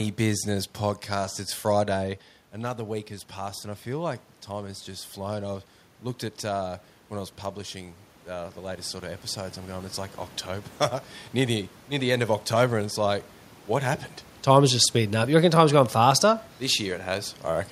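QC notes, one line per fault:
2.59–5.75 s and 6.56–10.76 s, automatic gain rising: after the input dropped about 10 dB, the gain control slowly climbed about 4 dB, then 5 dB, swelling voice and room noise together.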